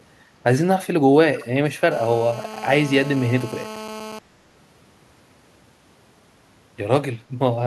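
Echo leak, 1.36 to 1.46 s: a faint copy of the speech returns about 272 ms late, likely from a far-end loudspeaker whose echo canceller let some through. GSM phone buzz, 1.91 to 4.19 s: a steady, raspy 217 Hz buzz about 16 dB below the speech, from circuitry rectifying a nearby 2G phone's call-transmission bursts.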